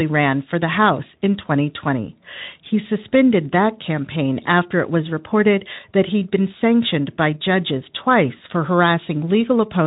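At 4.43 s the speech briefly smears into a short, weakened sound that lasts until about 4.47 s. This is VoIP packet loss concealed by the speech codec: the light-sounding Speex decoder filled a gap, which fits a single lost 20 ms frame, by extrapolating its last pitch and filter with falling gain.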